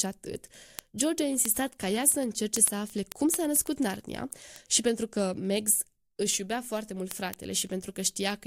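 Speech runs under word clock ticks from 0.12 s to 8.45 s. Sharp ticks of uneven strength repeat about every tenth of a second, around seventy in all. The receiver is not locked to the sender's clock. A drift near 200 ppm slips one sample per tick.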